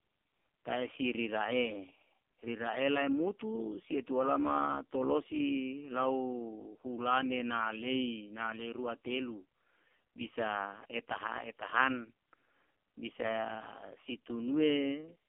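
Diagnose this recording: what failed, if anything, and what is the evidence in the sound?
The codec stage failed here: an AMR narrowband mobile codec runs through the whole clip. Nothing above 3.4 kHz survives, and little below 250 Hz, but a plain band-limited phone line would only sound muffled. This speech sounds buzzy and synthetic because the codec rebuilds each 20 ms frame from a vocal-tract model and a few pulses. Such heavy damage fits the lowest AMR-NB mode, around 4.75 kbps.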